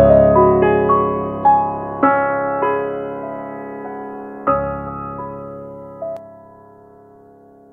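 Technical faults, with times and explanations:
6.17–7.72 s, channel delay (comb filtering): one channel runs roughly 10 ms late, so the mono sum cancels at evenly spaced notches from about 50 Hz. The music turns hollow and phasey.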